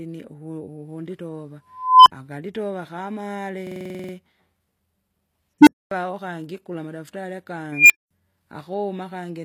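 Speech with three kinds of fault. Throughout, the treble sounds rebuilt rather than recorded: s sounds and upper harmonics come out gritty and metallic, which points to HE-AAC compression at a low bitrate of around 24 kbps as the likely cause. The top band is copied up from lower frequencies, so unlike plain low-pass codec dulling, the treble is present but does not match the fundamentals. An unstable filter appears three times as a tone that swells and then cuts to silence. From 1.70 to 2.12 s, a tone around 1 kHz builds for 356 ms, followed by 58 ms of silence. From 5.61 to 5.91 s, just before "wakangi kula madaftari", a tone around 300 Hz builds in 60 ms, followed by 244 ms of silence. From 7.72 to 8.11 s, just after "wakangi kula madaftari", a tone around 2 kHz builds for 176 ms, followed by 209 ms of silence. A runaway tone followed by a gap sets this apart from ordinary feedback, which keeps ringing. 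From 3.67 to 4.13 s, a system hang loop repeats the same 46.44 ms piece exactly 10 times. The result is a machine-gun stutter at 21.5 Hz, which fits a 2048-sample buffer, and essentially no audio appears to be skipped. The repeats being identical distinguishes this from network jitter or concealment, which vary.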